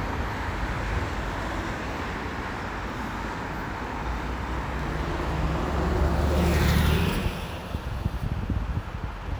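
No technical faults can be heard anywhere in this recording of sounds.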